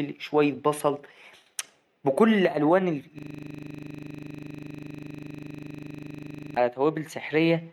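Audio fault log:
3.19–6.57 s, system hang loop: Right after "بكل ألوان", one 40 ms slice repeats exactly. The frozen system leaves the hardware cycling its buffer, giving a steady 25 Hz buzz.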